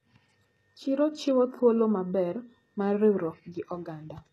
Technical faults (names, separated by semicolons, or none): HE-AAC compression